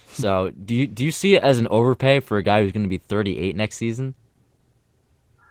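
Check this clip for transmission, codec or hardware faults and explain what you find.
One codec fault runs through the whole recording: Opus voice compression, and the damage is plainly audible from start to finish. The sound points to Opus running at a low bitrate near 16 kbps in hybrid mode with 20 ms frames. A linear-prediction layer carries the speech below 8 kHz with a coarsely coded excitation, which leaves the voice hoarse and faintly robotic. A thin transform layer covers the band above that. On a spectrogram the upper band looks patchy and smeared in 20 ms blocks, and the harmonics below 8 kHz look roughened.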